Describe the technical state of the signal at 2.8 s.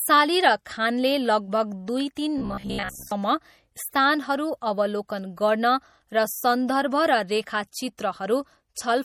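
At 2.8 s the speech sits inside a stretch of robotic sound from repeated short buffers, running from 2.38 to 3.12 s. Likely cause: new audio arrived too seldom, so a fragment of about 15 ms was replayed over most of that span while real audio was skipped. The result is a rigid buzz at 66.8 Hz. Unlike a codec's shifting swirl, its rate never varies.

Beneath it, MP3 compression is plainly audible throughout, which fits a low bitrate around 48 kbps. Weak frequency lines drop in and out between frames, giving a watery, swirly texture with smeared attacks, and nothing sounds above 17.6 kHz. This damage wanders irregularly instead of buzzing at one fixed rate.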